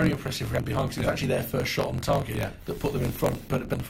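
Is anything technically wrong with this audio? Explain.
Yes, there are two faults.

Throughout the clip there is a block size mismatch (truncated). One stage writes longer blocks than the next stage reads, so the tail of every block is discarded. This produces a steady buzz at about 46.9 Hz, which fits a 1024-sample read block. The sound also runs 1.12 times fast while keeping roughly its normal pitch.

At 0.58 s there is damaged data in the compressed stream. Corrupt bytes there made the decoder misread the frame and lose sync, then search ahead for the next valid frame header. It is heard as a brief blip in the audio.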